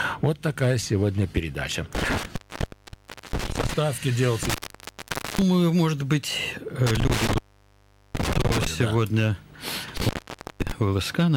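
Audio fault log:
1.95–3.74 s, 4.43–5.42 s, 6.87–8.67 s, 9.97–10.72 s: intermittent contact. A loose plug or cable keeps opening, so the sound drops out for about 0.5 to 1 s each time, with crackle where it breaks and reconnects.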